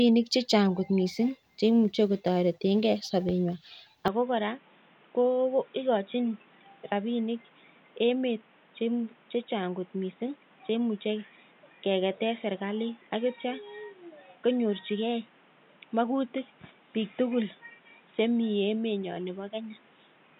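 From 4.08 s to the end, the speech abruptly goes dull and boxy with nothing above 3.8 kHz, drops a few decibels, and picks up a new noise floor well below it, with no gap at the change. That's most likely the input switched to a poorer device.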